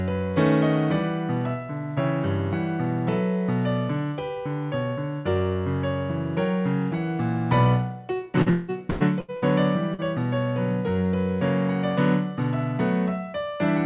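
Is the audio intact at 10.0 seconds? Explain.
No. From 9.94 to 10.00 s there is a short concealed packet loss: about 40 ms of audio never reached the decoder in time, so the receiver filled roughly 43 ms by extending the preceding sound and then blending back into the real signal. It comes across as a brief smear or wobble. On a spectrogram, capped at 4 kHz by the G.711 call codec, the patch looks like a repeated or blurred slice; the waveform shows a stretch with a seam at the rejoin.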